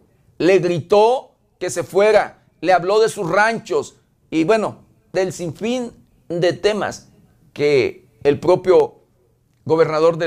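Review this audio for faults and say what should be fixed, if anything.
A loud pop at 8.80 to 8.83 s, one pulse a few decibels over the sound, likely a plug or static spike; the sound continues underneath, unlike a dropout. Avoid touching cables, plugs or switches while recording, and ground the equipment to discharge static.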